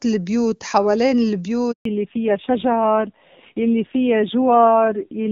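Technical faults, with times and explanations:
1.71 to 1.85 s, handover gap: the speech fades out within a few tens of milliseconds and 140 ms of silence follows while the call switches networks and no speech frames arrive. On the waveform this is a flat line, and the spectrogram shows a blank vertical band there.
1.85 s to the end, fallback to narrowband: from here the call drops from HD Voice at 23.85 kbit/s to narrowband AMR at 5.9 kbit/s. Nothing remains above 4 kHz, so the voice turns dull and rough. The spectrogram shows a hard ceiling at 4 kHz where the higher energy used to be.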